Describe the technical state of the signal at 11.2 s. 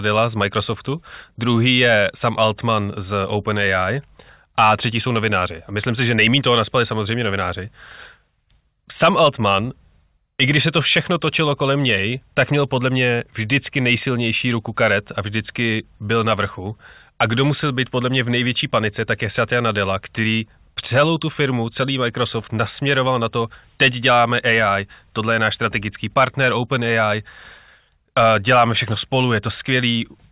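The audio at 11.2 s is intact, with no fault audible at that moment.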